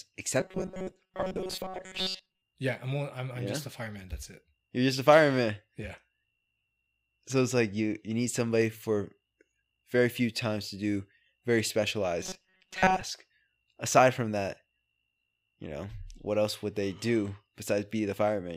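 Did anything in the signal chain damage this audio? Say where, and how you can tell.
Yes. The buffer stage was likely starved, so instead of new audio a short chunk kept being replayed, giving robotic sound from repeated short buffers at 0.40–2.42 s and 12.23–13.01 s. Most real speech there is skipped, and a rigid 188 Hz metallic buzz, fitting a buffer of about 5.3 ms, is imposed on the voice.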